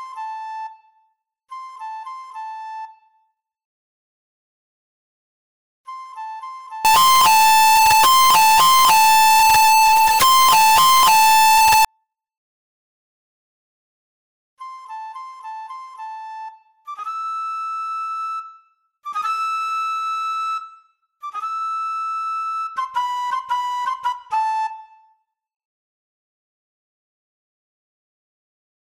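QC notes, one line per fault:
6.85–11.85 s, float read as integer: 32-bit float samples were likely decoded as 32-bit integers, so sign and exponent bits set each value. The waveform turns almost square at an almost fixed, high level, making the sound extremely loud and harsh, with quiet passages raised to match loud ones.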